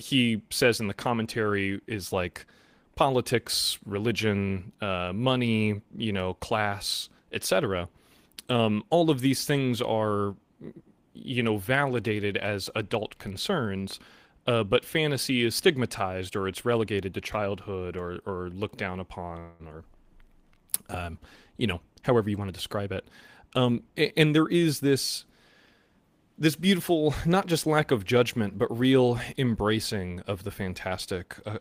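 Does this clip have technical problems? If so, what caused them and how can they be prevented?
Yes. A call audio freeze occurs from 19.39 to 19.62 s, right after "or or looked down". The last sound stretches into a fading buzz for about 0.2 s, then speech resumes where it stopped. Nothing is lost, but the delay grows. Packets were likely held up in the network, draining the jitter buffer. A steadier network path or a deeper jitter buffer would prevent it.

Jitter buffer speed-up follows, from 21.54 to 22.93 s and again from 23.43 to 24.55 s. Speech runs about 7% faster at unchanged pitch and sounds slightly hurried. The buffer had overfilled, so many tiny pitch-period slices were cut, about a tenth of a second each time. Gentler, slower delay adjustment in the jitter buffer would avoid this.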